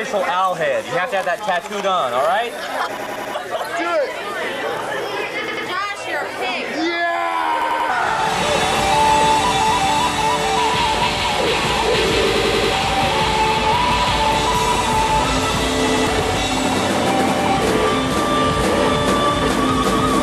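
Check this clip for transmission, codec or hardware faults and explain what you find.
Two kinds of fault are present: a repeated buffer stutter and corrupt frames decoded.

Repeated buffer, at 2.97–3.34 s, 5.48–5.67 s, 7.62–7.90 s, 12.35–12.73 s and 15.88–16.07 s: late data made the device replay its last roughly 93 ms block, which fits a 4096-sample buffer. The result is hard-edged stutters of two to four extra repeats.

Corrupt frame decoded, at 3.64 s and 10.17–10.23 s: the decoder played frames with flipped bits, so energy landed at wrong frequencies, heard as brief chirp-like blips.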